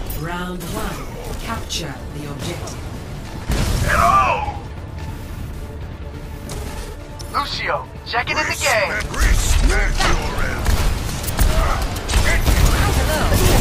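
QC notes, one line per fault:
Nothing stood out on listening.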